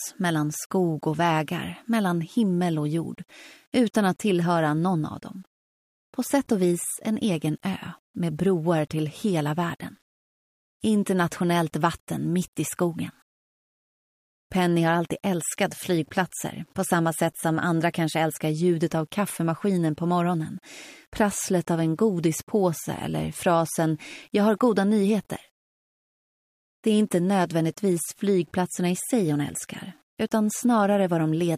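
A likely cause is the signal being reduced to a very short word length and rounded without dither, which fits about 9 bits. That is low bit depth without dither, and it lasts the whole clip. Because the rounding error tracks the waveform, the audio carries a grainy, gritty distortion roughly 40 dB below the signal that changes with the material, roughest in quiet passages, where the faintest detail collapses into sputtering or silence.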